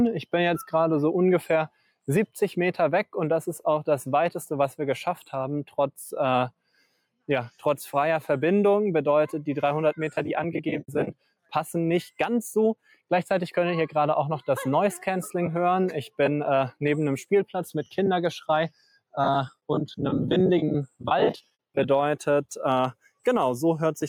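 The audio has gain pumping from start to finish. The gain swings by about 5 dB. Loud and soft passages sit squashed together. The likely cause is input gain set far too high, with a fast limiter clamping each peak.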